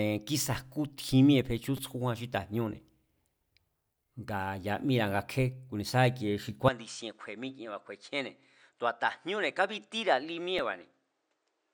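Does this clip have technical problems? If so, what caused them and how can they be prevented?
Yes. At 1.77 s and again at 10.59 s, new audio did not reach the output in time, so the device played its last buffer again, a repeated buffer fault. The repeated piece fits a buffer of about 5 ms. At 1.77 s it sounds three extra times, and at 10.59 s once more, each with a hard join. Pieces this short come across as a brief click or buzz rather than a clear stutter, and about 15 ms and 5 ms of real audio are skipped. Using a larger buffer or giving the audio thread higher scheduling priority would prevent these underruns.

From 6.69 s to the end, the recording likely switched its input to a poorer device, such as another microphone or a headset's call profile. There is no silence at the change. The level drops by about 10 dB, nothing above 9.2 kHz remains so the sound turns duller, and a new noise floor appears about 45 dB below the signal. 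Locking the input to one device and turning off automatic device switching before recording would prevent this.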